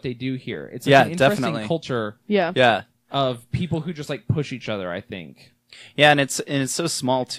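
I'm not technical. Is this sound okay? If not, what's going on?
Yes, it's fine: nothing in this recording is broken or glitching, so there's nothing to worry about.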